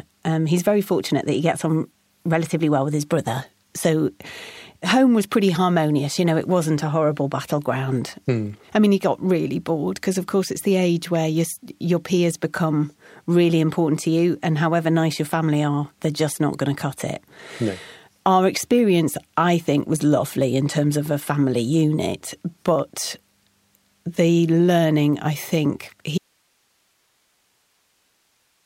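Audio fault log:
26.18 s to the end: audio dropout to a faint residue. Just after "the learning I think" the speech cuts off abruptly, with no fade, and does not return before the clip ends. What remains is only hiss, some 45 dB below the speech level, so the path after the break stayed live while the wanted signal vanished. The likely cause is a lost feed or disconnected source upstream, leaving the downstream chain passing only its own noise floor.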